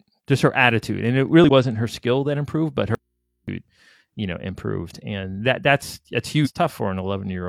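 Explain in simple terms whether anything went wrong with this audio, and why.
A couple of things go wrong in this speech clip, of two different kinds.

First, there's damaged data in a compressed stream, twice. Right after "her attitude and it", from 1.44 to 1.49 s, you get a quick glitch before "her skill that improved" picks up. The same happens just after "and that that's that's", from 6.41 to 6.48 s. In both spots a bit of the compressed file was garbled. The decoder couldn't make sense of it, lost its place for a moment and had to jump ahead to the next chunk it could read, which is what produces that brief glitch.

Second, there's an audio dropout to a faint residue. Just after "skill that improved but", at 2.95 s, the speech cuts out abruptly for about half a second, until 3.48 s. Nothing is left but a very quiet mains hum, far below the voice. The sound going in was lost, but the recording chain after that point kept running, so it picked up the hum instead. 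A likely cause is a break in the signal path before that point, leaving the input open.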